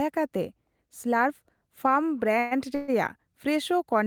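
At 2.39 s the speech stalls for about 0.14 s, and at 2.75 s it stalls again for about 0.15 s. Both are call audio freezes: packets likely arrived late and the jitter buffer ran dry, so the receiver stretched the last sound into a fading buzz before resuming exactly where it stopped. On a spectrogram each appears as smeared horizontal bands of about 120–130 ms; the waveform shows a decaying repetitive stretch, with nothing lost but later audio delayed.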